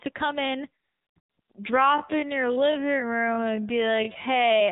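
A speech clip carried over the AMR narrowband mobile codec throughout. Everything above 4 kHz is missing, and the voice has the buzzy, synthetic texture of a low-rate mode, which fits roughly 7.4 kbps AMR-NB where too few excitation pulses per subframe are available to model it. Right after "come in", the phone stopped sending speech frames and AMR comfort noise fills the gaps from 0.84 to 1.16 s, 1.20 to 1.38 s, 1.40 to 1.50 s and 1.52 to 1.54 s. The real background is swapped for smooth synthetic hiss that switches in and out. From 1.72 s, just before "I'm going", to the end, the pace abruptly slows to about 0.57 times normal while pitch holds, likely a time-stretched section where short pieces were repeated to lengthen the audio.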